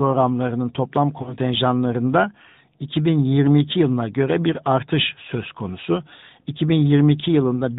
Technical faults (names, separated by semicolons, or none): AMR narrowband mobile codec; lost AMR speech frames